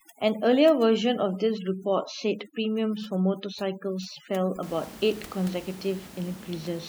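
From 0.00 to 4.63 s the background drops and breaks up into twinkling specks. This is overdone noise removal: a suppressor set too strong cuts frequency bands near its noise estimate, taking the room noise, about 22 dB below the speech, and quieter speech detail with it.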